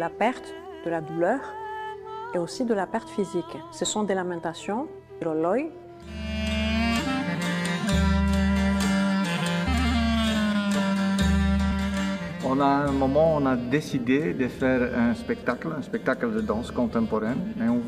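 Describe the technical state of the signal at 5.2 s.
At 5.20 s there is a burst of damaged data in a compressed stream, lasting about 14 ms. The decoder misreads the corrupted frame and resyncs, producing a brief blip. A spectrogram shows a thin broadband vertical smear, and the waveform shows a short discontinuity.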